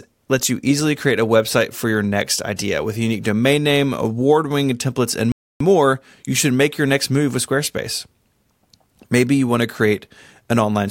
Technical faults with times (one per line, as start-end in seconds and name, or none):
5.32-5.60 playback stall